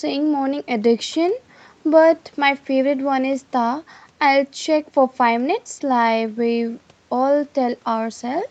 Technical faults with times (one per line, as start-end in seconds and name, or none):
none